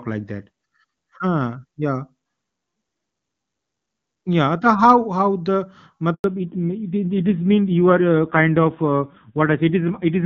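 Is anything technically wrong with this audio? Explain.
Yes, there are two faults in this speech clip, both at the same moment.

At 6.14 s a handover gap removes 100 ms of audio, ending at 6.24 s. While the call switched networks no speech frames arrived, so the signal fades out within tens of milliseconds and stays silent until the new link delivers audio.

From 6.24 s to the end there is a fallback to narrowband. The call drops from AMR-WB (HD Voice), whose earlier stretch sounds clean and fits its top 23.85 kbit/s rate, to AMR-NB at a low rate, likely 5.9 kbit/s. Nothing above 4 kHz remains, so the speech sounds dull, muffled and rougher.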